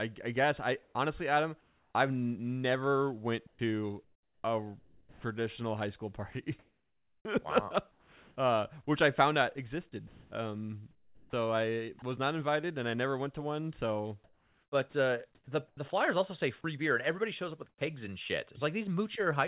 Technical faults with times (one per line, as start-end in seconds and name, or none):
0.83-1.94 comfort noise in place of the background
3.47-3.59 sound dropped by the voice detector
4.79-5.24 sound dropped by the voice detector
6.32-8.36 sound chopped by the voice detector
10.07-12.02 sound chopped by the voice detector
14.24-15.77 sound chopped by the voice detector
17.69-17.81 sound dropped by the voice detector